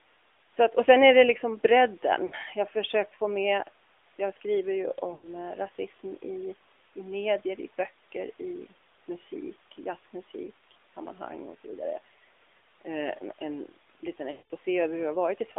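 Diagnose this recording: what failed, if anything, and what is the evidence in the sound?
The codec stage failed. The speech is confined to roughly 300 Hz to 3.6 kHz, with nothing above. It has a buzzy, synthetic edge throughout. That points to the AMR narrowband mobile codec, at a mode around 10 kbps, rebuilding the voice from a coarse vocal-tract model. The room noise beneath the speech is also coloured by it.

The network stage also failed, causing lost AMR speech frames. At 2.26 to 2.35 s and 5.14 to 5.29 s, the voice smears briefly for 60 and 80 ms. At 14.32 to 14.46 s, a 180 ms gap stretches and fades toward silence. The decoder repeated old pitch and filter settings with falling gain.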